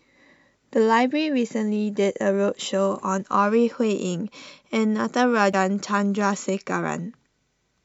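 At 5.50 to 5.54 s, damaged data in the compressed stream corrupts a short run of frames, so the decoder misreads them and loses sync while it hunts for the next valid frame header. In the speech this comes through as a brief chirp, squawk, click or short hole lasting about 40 ms.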